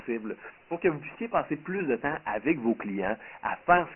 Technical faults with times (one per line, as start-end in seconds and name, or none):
0.00-3.95 Dialogic VOX ADPCM